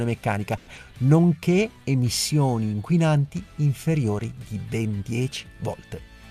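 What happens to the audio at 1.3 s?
The receiver's jitter buffer ran low or had just raised its target delay and slowed playback to rebuild its reserve, a jitter buffer slow-down from 1.20 to 1.68 s. Repeating short pitch periods added about 61 ms, so the sound runs at 89% speed with unchanged pitch, drawn out.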